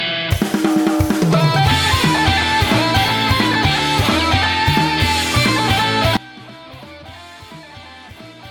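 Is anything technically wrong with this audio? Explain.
Yes. From 6.17 s to the end at 8.50 s, the sound collapses by about 21 dB into a faint residue. This is likely one channel inverted: opposite polarity cancels the shared centre content. Unlike a dropout, the left-right difference remains audible rather than falling silent.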